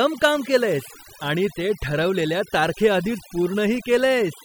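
Overdone noise removal runs through the whole clip, from start to finish. A noise reduction stage was pushed too hard, so any frequency band sitting close to its noise estimate gets pulled far down or cut out entirely, and the quieter parts of the speech are removed along with the noise. The gaps between phrases drop to near silence speckled with twinkling artefacts.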